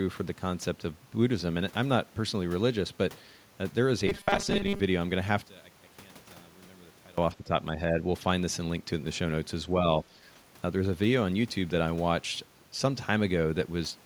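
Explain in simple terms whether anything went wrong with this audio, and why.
Three things go wrong in this speech. From 4.07 to 4.80 s there's robotic sound from repeated short buffers: the voice turns into a stiff metallic buzz around 200 Hz. That's likely the software repeating a tiny 5 ms slice over and over while most of the real audio gets skipped.

From 5.44 to 7.18 s the voice nearly disappears, shrinking to a faint trace. The likely cause is one channel inverted: one stereo side is flipped upside down, so the shared voice cancels itself when both sides are mixed together.

Right after, between 7.34 and 7.51 s, the voice briefly dips, a moderate drop lasting about a sixth of a second. That points to speech suppressed in double talk, likely an echo canceller getting confused by both sides talking at once and turning the voice down.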